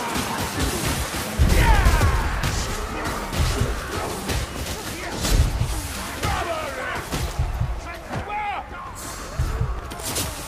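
No technical faults are audible.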